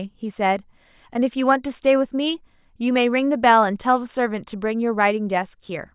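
No dropouts, clipping, glitches or other playback faults turn up anywhere in this recording.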